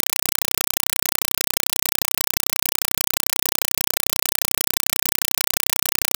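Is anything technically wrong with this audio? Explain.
Yes. Throughout, a compressed stream is played as audio. Undecoded AC-3 data, which fits a 192 kbps stream, is treated as samples, producing 4.0 ms noise bursts 31.25 times per second: loud chattering static in place of the speech.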